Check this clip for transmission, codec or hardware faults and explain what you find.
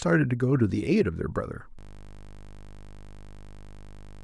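One hardware-level fault is present: a system hang loop starting at 1.79 s and running to the end of the clip. At that point the speech stops progressing. Playback freezes, but the audio device keeps reading its ring buffer, so the same 20 ms slice repeats over a hundred times. Because the loop is so short, it repeats 50 times per second and fuses into a steady, flat 50 Hz buzz rather than a stutter.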